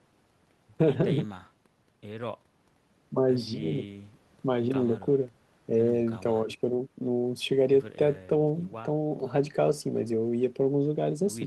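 No technical faults can be heard anywhere in the recording; the speech signal stays steady and intact throughout.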